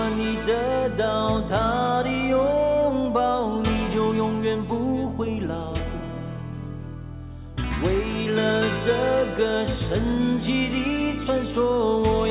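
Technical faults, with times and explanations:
No technical faults are audible.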